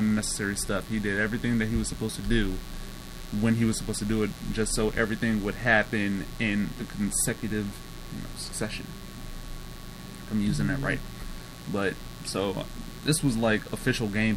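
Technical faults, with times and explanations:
Throughout, mains buzz: a steady, raspy buzz sits under the whole clip, roughly 20 dB below the wanted sound. It is built on 60 Hz mains. Sharp switching spikes, arriving twice in every mains cycle, have leaked into the signal path. Because those spikes are so abrupt, they carry a dense ladder of 60 Hz harmonics reaching up to several kHz. That is why this buzz sounds gritty and edged rather than like a smooth low hum.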